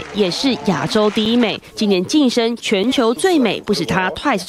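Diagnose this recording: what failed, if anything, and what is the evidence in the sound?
Two sharp ticks, at 1.25 s and 2.83 s, each a hole of about 5.8 ms where the sound drops straight to digital silence and returns with no fade. These are blocks of digital silence, a failure at the driver or buffer stage: the output buffer likely wasn't filled in time, so zeros went out instead. The abrupt edges on either side produce the clicks, and the identical gap lengths fit a 256-sample buffer.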